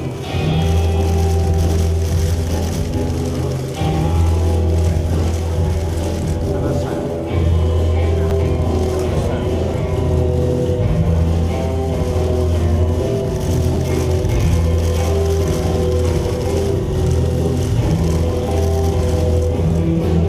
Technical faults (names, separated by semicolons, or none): repeated buffer